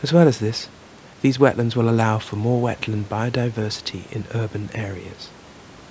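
Nothing faulty is audible anywhere in this speech.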